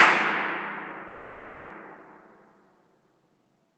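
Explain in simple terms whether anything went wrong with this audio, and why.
From 1.07 s to 1.72 s the sound stalls into a fading buzz for about 0.63 s, then carries on where it stopped with nothing lost. This call audio freeze was likely caused by packets arriving late, so the receiver stretched the last sound to fill the wait.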